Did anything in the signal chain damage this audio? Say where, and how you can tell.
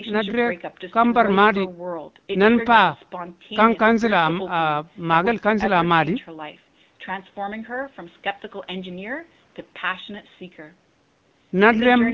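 No, nothing along the chain has harmed this speech; the faint room noise sits well below it, and the call's microphone processing and HD Voice coding at 12.65 kbit/s are doing just what they normally do.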